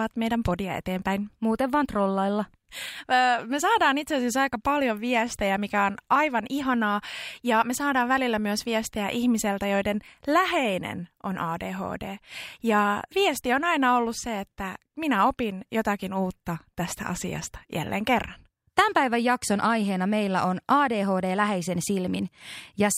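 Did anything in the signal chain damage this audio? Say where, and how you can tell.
No, nothing audible in this speech recording points to damage at any stage of the signal chain.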